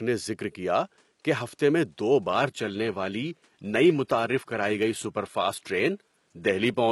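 At 2.28 s, right after "کہ ہفتے میں دو", the speech abruptly drops in quality and stays degraded to the end. This is an adaptive stream at a lower bitrate: the player switched to a cheaper encoding when the connection slowed, and the sound fits a drop from roughly 96 kbit/s AAC to about 20 kbit/s HE-AAC. Codec artefacts rise, while the faint room noise, about 45 dB below the speech, carries on. Unlike packet loss, the switch leaves no gap or stutter, only a sudden step down in quality.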